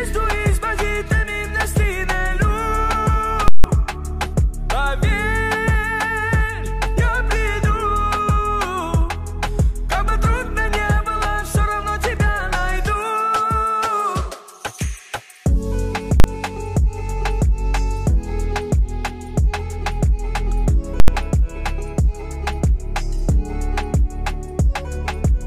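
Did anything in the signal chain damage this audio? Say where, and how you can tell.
Yes, there are invalid numbers at full scale at 3.48–3.64 s, 16.20–16.24 s and 21.00–21.08 s. A processing calculation spat out infinite or invalid values that got clamped to an extreme, so each block sits flat far past the audio's peaks. You hear loud pops with silence between.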